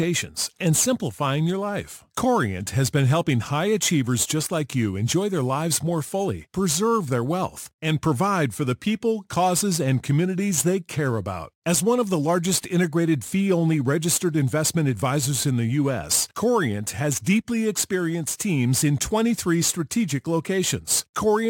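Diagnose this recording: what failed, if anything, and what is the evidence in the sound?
Crude rate conversion at the sample-rate conversion stage: samples were simply repeated with no filtering, consistent with a 44.1 kHz to 48 kHz step. Throughout the speech, a gritty, inharmonic fizz trails louder and brighter syllables, sitting roughly 20 dB below the speech.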